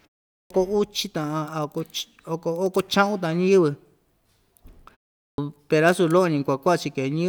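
Clipped start after a pause at 0.39 s and again at 5.28 s: both times the output device appears to have dropped into a sleep state during silence, so the first 112 ms and then 101 ms of speech are lost while it wakes. The first follows 0.39 s of silence at the very start, the second a 0.4 s pause. Each time the speech bursts in abruptly, missing its opening sounds.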